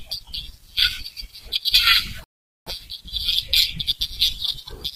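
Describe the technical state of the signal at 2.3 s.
At 2.3 s the playback is inside a rebuffering stall from 2.24 to 2.67 s: the player ran out of buffered audio, went silent for about 0.43 s, then resumed the speech exactly where it stopped.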